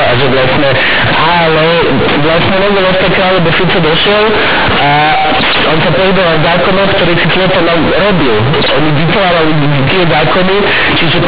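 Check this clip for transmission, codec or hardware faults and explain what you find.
One fault runs through the whole clip. Companded audio read as linear, throughout: A-law G.711 bytes are being played as raw 8-bit samples with no expansion step, so every sign change swings the output across roughly half its range and quiet passages come out as loud as speech peaks. The result is harsh, buzzy distortion over the entire recording, with heavy noise filling the pauses. Under that, the narrow band of telephone-rate A-law coding is still audible, with nothing above 4 kHz.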